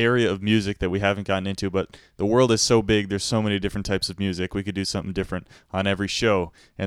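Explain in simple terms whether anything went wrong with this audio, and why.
Nothing went wrong here; the speech comes across steady and whole, with no dropouts, glitches or odd noises anywhere along the way.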